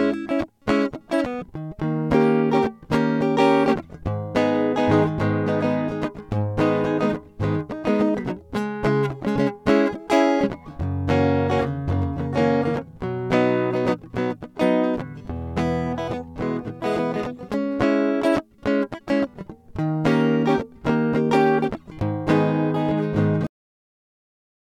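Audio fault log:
23.47–24.64 s: cut-off end. The music stops abruptly mid-sound at 23.47 s and falls straight to digital silence with no decay, because the final buffers were never written.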